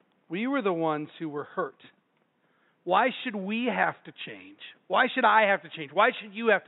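Nothing in the system went wrong in this speech recording, and the only thing underneath it is a faint bit of room noise sitting about 44 dB below the speech.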